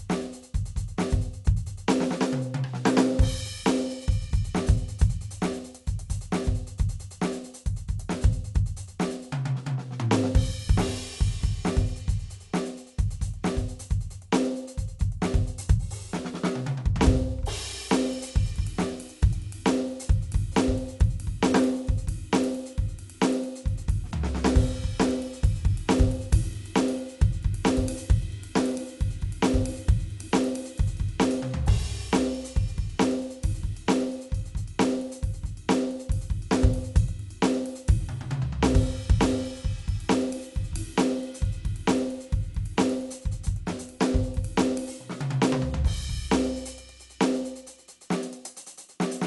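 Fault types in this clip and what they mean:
Dolby Digital compression: music dulled with nothing above 11.5 kHz, plus rough, fluttering noise around tones, likely from starved low-bitrate AC-3 coding; a plain low-pass adds no such noise.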